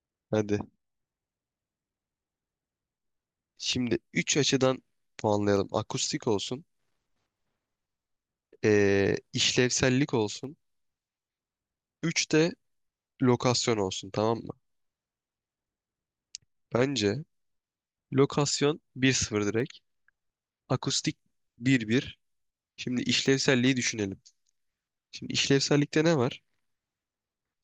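From 0.68 s to 27.53 s the speech carries a click roughly every 0.61 s, about fifty in all, evenly spaced regardless of what is being said. The pattern points to clock drift buffer slips: two devices likely running on independent clocks that disagree by a few hundred parts per million, so the buffer between them drifts until a handful of samples is dropped or repeated, leaving a brief discontinuity at each slip.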